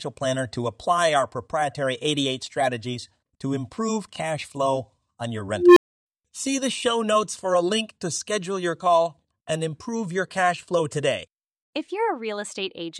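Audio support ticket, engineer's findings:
Unstable filter in the processing chain: recursive stage running with bad coefficients, output diverging until numeric overflow and reset. Symptom at 5.55–6.06 s, right after "cash flow on your": tone around 400 Hz swells over 218 ms into a loud clipped squeal, then output drops out for 300 ms before the filter resets.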